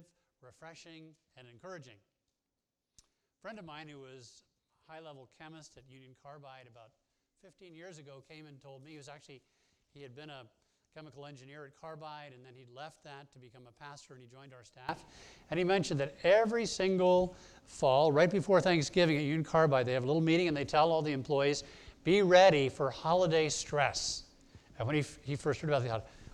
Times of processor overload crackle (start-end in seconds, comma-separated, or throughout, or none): none